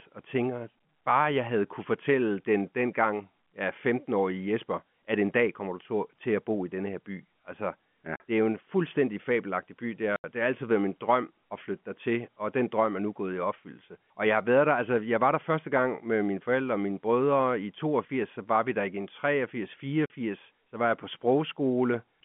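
At 8.16 s, 10.16 s and 20.06 s the speech drops out completely for 40, 80 and 40 ms. These are packet loss filled with silence. The receiver had nothing to play for those stretches and inserted silence. The lengths are exact multiples of 20 ms, which fits 20 ms packets. Concealment would smear or repeat the sound. Here the holes are dead and hard-edged, just before "det er jo en", "det har altid været" and "så var jeg på", over the narrow telephone band.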